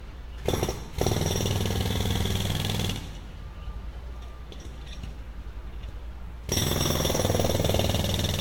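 Generation loss runs throughout: the sound is swirly, smeared and hollow, with blurred attacks and nothing above 16.7 kHz. This likely comes from about four successive lossy encodes, each re-quantising on a new frame grid, fitting Vorbis at around 64 kbit/s.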